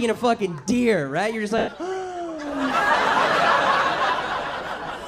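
From 1.58 to 1.68 s the sound briefly turns into a grainy, noise-like smear that keeps the rough colour of what came before and then thins out toward quiet before the signal returns. These are lost LE Audio frames: about 100 ms of Bluetooth LE Audio went missing, which fits a run of ten 10 ms frames, and the LC3 decoder filled the gap by repeating the last spectrum with scrambled signs, fading it after the first few frames.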